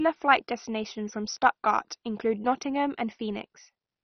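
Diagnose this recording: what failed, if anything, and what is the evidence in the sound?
The codec stage looks like the culprit here. Across the whole speech clip the top end is simply gone, with nothing above about 6.1 kHz, and what's left has that gurgly, granular texture, with the upper bands flickering in and out. That's classic MP2 compression starved of bits, likely something down around 32 kbps. The encoder can't afford the high sub-bands, so it drops them and quantises the surviving ones coarsely.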